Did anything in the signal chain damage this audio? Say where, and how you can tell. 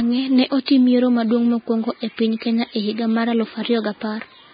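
Yes. Vorbis compression runs through the whole speech clip, likely introduced at the codec stage. Nothing is present above 4.9 kHz, so the treble is cut off abruptly. What remains in the upper band sounds hissy and grainy, because the coder quantised the residue so coarsely that fine detail turned into noise of similar energy. The damage is heavy, which fits a very low bitrate of around 15 kbps.

Pre-echo appears from 0.66 to 0.68 s, also at the codec stage. A short hiss, about 23 ms long, comes just before a sharp attack, and the onset itself sounds smeared. The transform spreads its quantisation noise across the whole block. Because the attack lands late in that block, noise sized for the loud part fills the quiet moment ahead of it.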